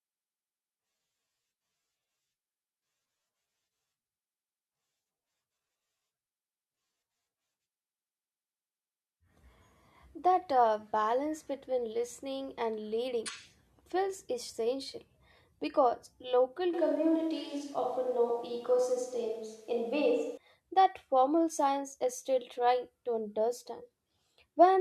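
From 16.74 s to 20.37 s the speech turns abruptly roomy and hollow, losing low end, with background noise rising to roughly 35 dB below the speech while the level stays about the same. This is likely a switch to a distant microphone, reverting sharply at 20.37 s.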